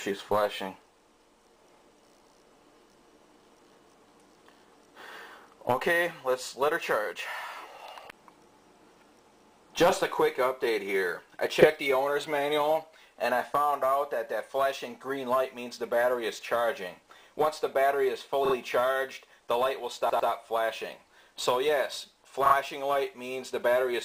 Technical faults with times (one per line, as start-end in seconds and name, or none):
11.61-11.66 repeated frames
18.45-18.54 repeated frames
20.09-20.29 repeated frames
22.45-22.54 repeated frames